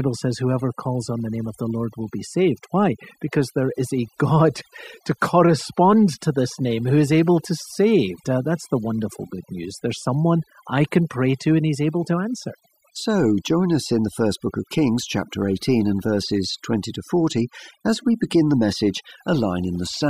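Overdone noise removal runs through the whole clip: a noise reducer pushed too hard cuts individual frequency bands whenever they sit near its noise estimate, taking quiet parts of the speech too. The background drops and breaks up into twinkling specks.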